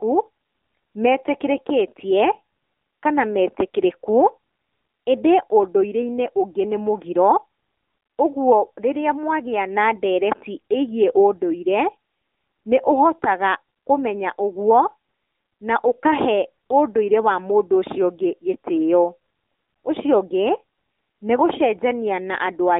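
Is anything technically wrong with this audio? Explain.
Yes. The speech carries AMR narrowband mobile codec damage from start to finish. The band runs only from 250 Hz to 3.7 kHz, so the voice sounds thin and muffled, with nothing above 3.7 kHz. AMR-NB models the vocal tract and drives it with a few pulses per short subframe. At low bitrates that model cannot capture the voice fully. The damage is plainly audible as a buzzy, synthetic quality, which fits one of the codec's lower modes, near 8 kbps.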